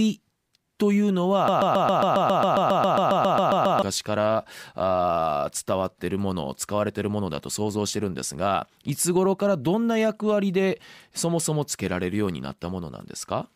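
From 1.48 to 3.82 s the speech falls into a broken-record loop: a 0.14 s fragment repeats identically 17 times, back to back, likely because the player or stream stalled and resent its last buffer. Unlike a stutter or echo, the repeats never vary or decay, and the missing speech never returns.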